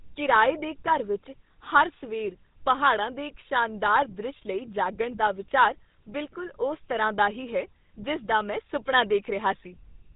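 Speech runs through the GSM full-rate codec throughout, leaving a buzzy, gravelly roughness from coarse pulse excitation, consistent with 13 kbps. Spectrograms show nothing above 3.8 kHz.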